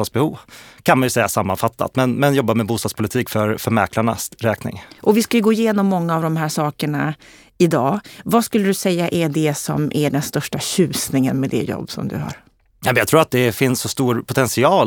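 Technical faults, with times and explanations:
No technical faults are audible in this speech.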